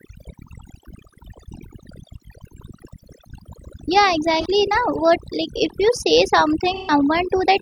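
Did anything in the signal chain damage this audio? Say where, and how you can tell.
Yes. Overdone noise removal in the processing stage runs throughout. The background drops with twinkling specks, and quiet parts of the speech get gated away along with the bands near the noise estimate.

AAC frame loss with concealment in the codec shows up at 4.41–4.46 s and 6.75–6.91 s. The decoder patches these gaps from the last good spectrum. The 128 ms gap fits about three lost frames.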